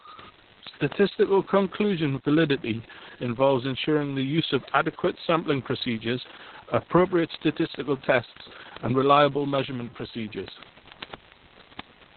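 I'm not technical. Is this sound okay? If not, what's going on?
No. Two problems run through the whole recording.

Low bit depth without dither, throughout: the speech has a rough, grainy fizz that rises and falls with the talking and gets worst in quiet moments. It's likely that the sound was stored with very few levels of loudness, which fits about 7 bits, and each value was simply chopped down to the nearest step instead of being smoothed. That rounding error follows the voice, so it sounds like grit stuck to the speech rather than a steady hiss.

Opus voice compression, throughout: the voice sounds muffled, hoarse and a little robotic, as if heard over an old phone line. The recording was squeezed very hard by a speech-oriented compressor working at a very low data rate. To save space it threw away everything above about 4.3 kHz, removing the crisp, airy part of the voice, and described the rest of the sound only roughly, which gives that buzzy, synthetic quality.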